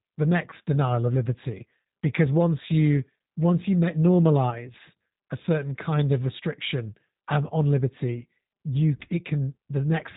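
Throughout, the speech carries G.729 codec damage: a rough, slightly synthetic quality and nothing above 4 kHz, from rebuilding each 10 ms frame out of a filter, pitch predictor and sparse pulses, which fits an 8 kbit/s coder. Unlike plain band-limiting, the texture itself is coarsened.

At 0.50 to 0.54 s, just before "denial of liberty because", and again at 4.50 to 4.57 s, there is VoIP packet loss concealed by the speech codec. About 20 ms of audio went missing each time, and the decoder filled it by extending the last pitch and filter. This is heard as a brief buzzy or noisy smear and a weakened onset, not a silent dropout or a click.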